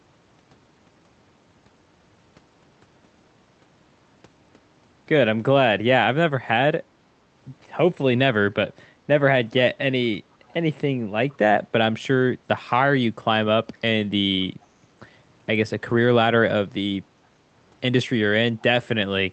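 Two brief, very faint scraps of delayed speech surface in this speech recording, at 10.48 to 10.53 s and 11.3 to 11.37 s. Each sits far below the main voice and trails it by 462 ms. This is an echo leak, likely from a loudspeaker on the other end whose echo canceller let part of its microphone pickup slip back into the call, which arrives through a call codec with audio reaching up to about 8 kHz.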